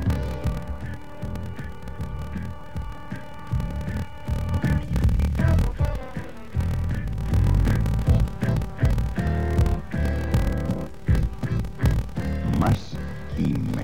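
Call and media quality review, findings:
Block size mismatch (padded), whole clip: writer stage fills about 1024-sample blocks, reader expects larger ones (roughly 1152), zero-padding each remainder. Result: steady 38.3 Hz buzz from the recurring gaps; playback slowed to 0.889x, pitch roughly unchanged.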